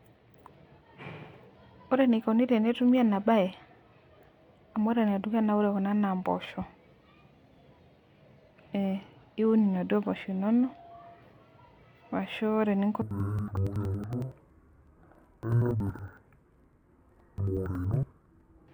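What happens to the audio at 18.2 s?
At 18.2 s the speech is inside a run of interleaved audio read as planar, lasting from 13.02 s to the end of the clip at 18.73 s. Each block of about 93 ms, which fits a 4096-sample block, has its alternating left and right samples split into two halves that are each stretched to twice their length. The speech drops an octave, sounds doubled and chops at about 10.8 Hz. Unlike simple half-speed playback, the overall pace stays correct.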